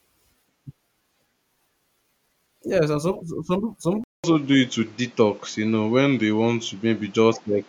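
At 4.04 s the speech drops out for about 200 ms. When it returns, it sounds duller and boxier, with nothing above 7.6 kHz. The level shifts by about 5 dB. A new background noise appears, roughly 30 dB below the speech. This poorer tone holds to the end of the clip. The cause is likely an input switched to a poorer device, a different microphone or a headset's call profile passing a narrower band.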